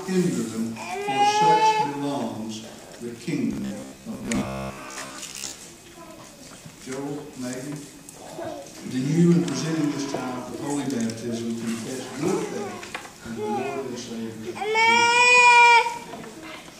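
From 3.53 to 5.66 s, new audio likely stopped arriving often enough, so the playback software kept filling the gaps by replaying its last short buffer while the real material in between was skipped. About half of what is heard in this stretch is repeated. The repeats fit a buffer of roughly 15 ms, and that fixed cycle imposes a steady 66.7 Hz buzz. The result is robotic sound from repeated short buffers: a rigid, metallic drone that still loosely tracks the underlying sound.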